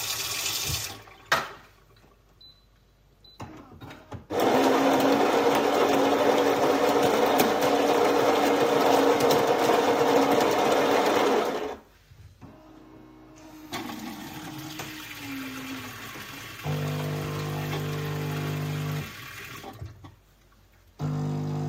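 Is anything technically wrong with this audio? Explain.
No, nothing technically wrong here.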